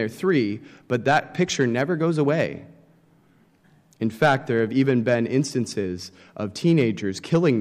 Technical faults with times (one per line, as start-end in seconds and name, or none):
none